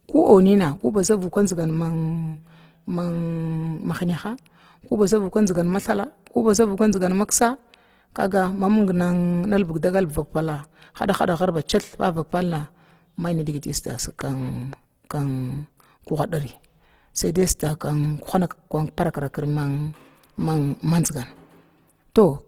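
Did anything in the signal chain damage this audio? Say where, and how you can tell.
Yes, at the codec stage, throughout the speech. It sounds grainy and rough rather than swirly, with bands filled in by noise, yet content still reaches about 20 kHz. That points to Opus compression, likely in CELT music mode at a low rate around 16 kbps.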